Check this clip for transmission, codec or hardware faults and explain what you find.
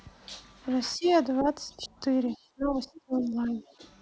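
Two echo-canceller faults are present, both tied to moments when both ends of the call seem to talk at once.

Speech suppressed in double talk: the speech dips at 0.97–1.06 s, 1.77–1.93 s, 2.54–3.62 s and 3.78–3.82 s. The deepest cut is about 30 dB in the long stretch. The likely cause is the canceller failing to separate talker from loudspeaker echo and attenuating both. A waveform shows the envelope suddenly shrinking, and a spectrogram shows speech energy fading or breaking into fragments.

Other side's voice leaking through: faint scraps of a second, far-end voice surface at 1.04–1.11 s and 3.69–3.74 s. They sit roughly 30 to 35 dB below the talker. They are likely loudspeaker playback the canceller did not fully remove. On a spectrogram they appear as weak formant traces.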